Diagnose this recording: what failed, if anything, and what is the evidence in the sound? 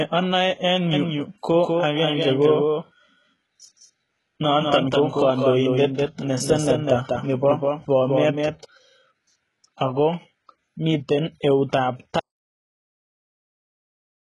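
Throughout, the speech's s sounds and upper treble are gritty and metallic, nothing is left above 11.4 kHz, and the coding damage is heavy. This points to the codec stage, likely HE-AAC at a very low bitrate, around 12 kbps, rebuilding treble by copying lower bands upward.

From 0.93 s to 8.65 s a second full-band copy of the speech trails the original by roughly a fifth of a second, a few dB quieter, dry and starting and stopping abruptly. This is likely a doubled audio track from a slower capture path or a misaligned edit.

At 12.2 s the speech cuts off mid-flow into silence with no room tone, lasting to the end of the clip. This audio dropout to silence most likely reflects lost input, such as a disconnected device or failed link, while the recorder kept writing silence.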